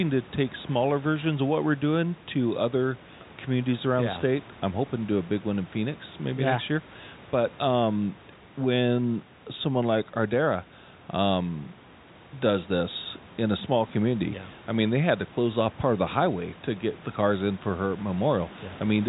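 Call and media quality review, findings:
No faults found: the speech is band-limited at 3.8 kHz, consistent with G.711 telephone coding, with room noise about 24 dB below the speech.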